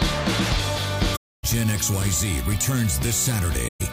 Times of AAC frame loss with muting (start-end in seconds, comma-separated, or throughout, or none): 1.16-1.44, 3.67-3.81